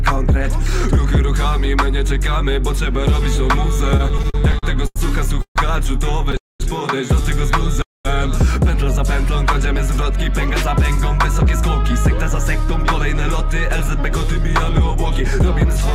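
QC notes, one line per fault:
3.97–4.98 s, repeated stalls (stutter): the sound halts eight times in about a second, with 223 ms of continuation filling gaps up to 90 ms long, about 22% of the span. Packets arrived late or too slowly, so the jitter buffer kept running dry and the receiver stretched the last sound each time. Nothing is lost, but the passage drags and jerks. On a spectrogram, short horizontal smears of frozen harmonics appear; the waveform shows repeated, slightly decaying cycles.
5.42–5.58 s, 6.37–6.62 s and 7.82–8.07 s, call audio freeze: the sound stops dead three times, for 140, 228 and 228 ms, and resumes exactly where it left off, pushing everything later by those amounts. A brief fading buzz of the last sound gives way to silence of about 100, 200 and 200 ms. The likely cause is packets held up in transit, emptying the jitter buffer. A spectrogram shows a short smear tapering into blank columns; the waveform shows a brief repeated tail, then flat line.
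11.62–15.92 s, jitter buffer speed-up: after the buffer filled past its target, the receiver trimmed it back by cutting out tiny pitch-period slices over and over, removing about a tenth of a second in total. Playback runs at 102% speed with pitch unchanged, too little for the close to sound clearly hurried. On a spectrogram, harmonic lines stay at the same frequencies while events sit marginally closer together; the waveform shows small, regularly spaced splice points with no gaps.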